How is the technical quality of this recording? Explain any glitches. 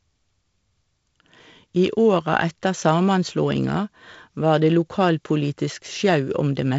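There's nothing here that counts as a glitch, just speech carried over G.722 wideband telephone coding, with nothing above about 7.7 kHz and the light, slightly noisy texture you'd expect from the codec's 48 kbit/s mode.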